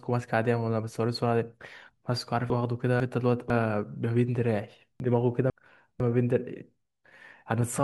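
At 2.5 to 3.5 s and again at 5.0 to 6.0 s, chunks out of order: a half-second block plays one slot late, after the block meant to follow it. The sound jumbles briefly across three hard joins, yet unlike a dropout, nothing is missing.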